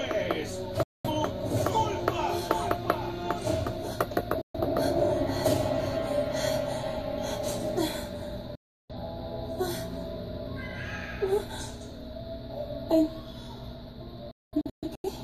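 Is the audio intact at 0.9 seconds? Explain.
No. At 0.9 seconds the sound sits inside a digital broadcast dropout that runs from about 0.83 to 1.10 s. The receiver stopped getting decodable frames and muted, dropping to silence through a very short fade of about 3 ms rather than a hard click. A gap of roughly 213 ms fits a handful of lost frames. Unlike a playback stall, the sound resumes further along, so what fell in the hole is gone rather than delayed.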